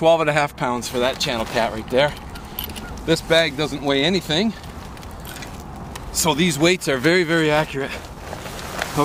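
Nothing technical stands out here; the audio holds steady the whole way, with no faults to point to at any moment.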